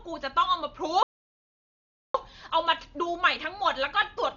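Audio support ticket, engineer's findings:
Dull, band-limited speech throughout, rough fluttering noise around voiced tones; likely Dolby Digital compression at a rate fitting about 40 kbps, starved lines dither-filled. Noise-fill flutter, not the metallic warble of other codecs.

Speech halts mid-flow 1.03 to 2.15 s, about 1.1 s of silence, then resumes; likely playback stall, player starved or thread blocked. One long clean gap, unlike short clicks or repeated dropouts from packet loss.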